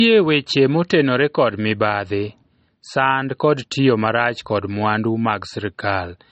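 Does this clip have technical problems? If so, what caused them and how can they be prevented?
Yes. Throughout the speech, the top end is missing: nothing is present above about 8.4 kHz, and the sound has the dull character of heavy MP3 compression. The likely cause is low-bitrate audio saved at a high bitrate. The cut-off and artefacts point to a low-rate MP3 encode, around 32 kbit/s, later re-encoded at something like 192 kbit/s. The larger second file keeps everything the first encode discarded out, and adds nothing back. To prevent it, encode from the original uncompressed source at an adequate bitrate rather than re-encoding an already compressed file.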